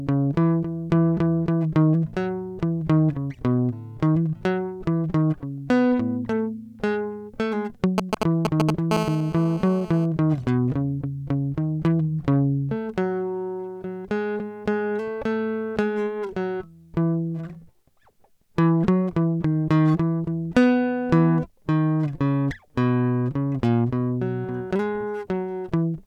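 GSM signalling bursts cut into this music recording from 7.98 to 8.71 s: a galloping dit-dit-dit of brief 217 Hz buzzes, louder than the music itself. A nearby 2G phone emitting short radio bursts while signalling gets rectified by the audio circuitry. GSM phone buzz follows from 8.91 to 10.06 s, a steady, raspy 217 Hz drone rich in harmonics and about 8 dB below the music. It comes from a nearby 2G phone transmitting in bursts 217 times a second during a call, with each radio pulse demodulated into the audio path.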